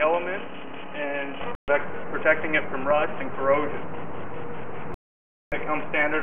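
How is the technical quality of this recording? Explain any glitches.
Two glitches break up the recording, both a digital broadcast dropout. At 1.55 to 1.68 s, and again at 4.94 to 5.52 s, the receiver stopped getting decodable frames and muted, so the audio cuts to silence for about 0.13 s, then 0.58 s. Whatever was transmitted then is gone. The hole lengths fit a run of lost 32 ms frames.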